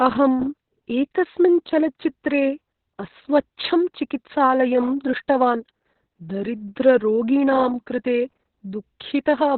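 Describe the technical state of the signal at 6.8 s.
At 6.8 s the speech is under heavy Opus voice compression, as it is throughout the clip. The SILK coder runs narrowband, consistent with roughly 6 kbps, so nothing above 4.2 kHz survives and the coarse excitation leaves the voice muffled, hoarse and slightly robotic.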